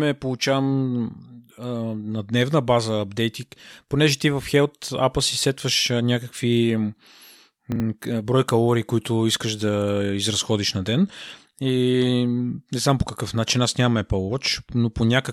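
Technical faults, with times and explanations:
7.72–7.80 s, chunks out of order: a 40 ms chunk of the speech plays one chunk late, after the chunk that should follow it. No audio is lost, but the swapped order creates three hard joins, heard as a brief jumbled stutter.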